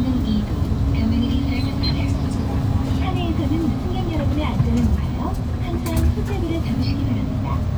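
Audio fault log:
No fault to log in this audio.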